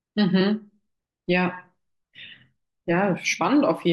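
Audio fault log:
0.40 s, compressed frames skipped: the speech lurches forward by around 70 ms, a gap that fits about three whole frames of a codec working in 23.2 ms frames going unplayed, either lost from the file or thrown out by the decoder as damaged.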